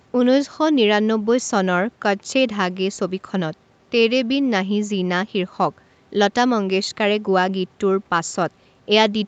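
No technical faults can be heard in the speech; its content stops at about 8 kHz, as expected from a call microphone chain and a wideband call codec, and the low end is trimmed by the usual high-pass filter.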